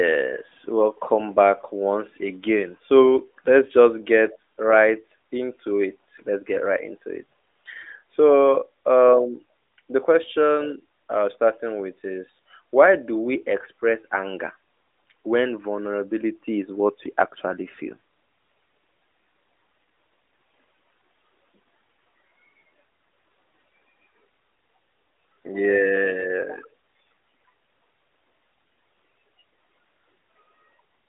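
Nothing here counts as a fault: the audio simply comes over a narrowband mobile line, with the AMR narrowband mobile codec holding it to roughly 300 Hz to 3.6 kHz and nothing above about 3.7 kHz, much as you'd expect from its top 12.2 kbps mode.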